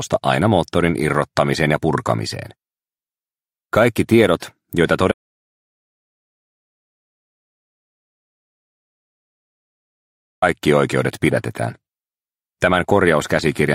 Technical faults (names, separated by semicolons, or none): audio dropout to silence